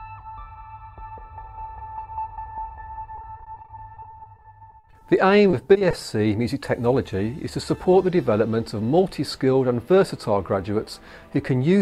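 From 3.15 to 5.03 s, repeated packet loss (robotic sound) chops the audio into many short gaps of up to 40 ms. Each gap is filled by extending the preceding sound, giving a choppy, stuttering texture with fragments missing. A briefer burst recurs from 5.51 to 5.95 s.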